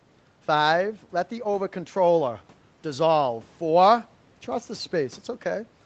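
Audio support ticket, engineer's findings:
Nothing to chase on this speech sample: it went through the usual call mic processing and the WebRTC call path with its Opus coding, top end stopping at 8 kHz as expected for that bandwidth, and no faults turned up on a listen.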